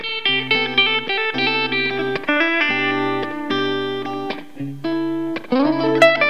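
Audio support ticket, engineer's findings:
Switching supply whistle throughout: faint high tone wandering between 3.07 and 3.25 kHz, roughly 45 dB below signal. Power supply running in audible burst mode, pitch drifting with load.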